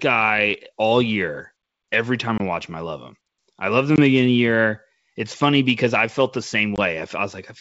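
Packet loss on an ADPCM call hits at 2.38–2.41 s before "I watch him I", at 3.96–3.99 s between "love him I love" and "the beginning", and at 6.76–6.79 s after "because I felt the". Each time about 20 ms, a single packet, drops to hard-edged silence. The decoder's adaptive predictor and step size then no longer match the sender's, so speech resumes with brief distortion before settling. The wideband G.722 coding around these gaps stays clear up to 7 kHz.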